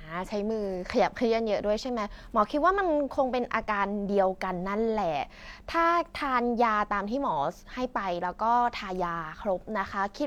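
No technical faults can be heard anywhere in the speech recording; the signal stays continuous and steady throughout.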